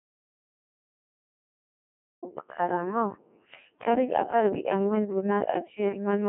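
Dead silence fills the opening of this speech recording, from the very start until 2.23 s: no room tone or hiss at all, and then the sound comes in abruptly. That is an audio dropout to silence, already under way when the clip begins. The likely cause is the input being lost, through a disconnected device, a failed link or an accidental mute, while the recorder kept writing empty samples. Whatever preceded 2.23 s is unrecoverable. Once the speech arrives, it is robotic and buzzy throughout, squeezed into a telephone-like band of roughly 200 Hz to 3.5 kHz with nothing at all above 3.7 kHz, and the damage is heavy. That is the signature of the Codec 2 vocoder, and the coarseness points to its 1.6 kbit/s mode. The decoder never receives the real waveform, only pitch, voicing, energy and a rough spectral shape, and rebuilds the voice from sine waves, so the natural texture is replaced by a synthetic buzz.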